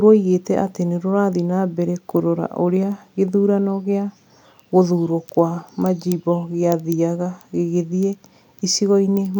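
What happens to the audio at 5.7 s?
Nothing goes wrong at 5.7 s; the speech there plays through intact, with no dropout, click or distortion.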